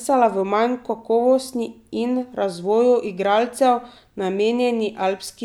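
No technical faults are audible.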